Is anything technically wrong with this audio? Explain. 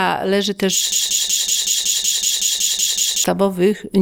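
Yes. From 0.92 s to 3.24 s there is a broken-record loop. A piece about 187 ms long plays 12 times, back to back and identical. The player, encoder or stream likely stalled and kept resending its last fragment. The audio due in that span is lost.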